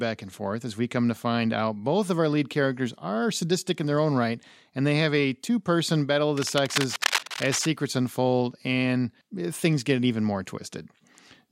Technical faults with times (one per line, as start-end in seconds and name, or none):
6.37-7.66 cable scratch noise